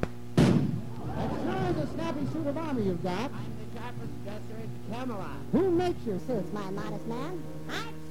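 From 6.18 s to the end at 8.11 s, a section at the wrong speed: the audio runs about 1.3 times too fast, likely from playback against the wrong clock. Pitch rises roughly five semitones along with the tempo, which separates it from a pitch-shift fault.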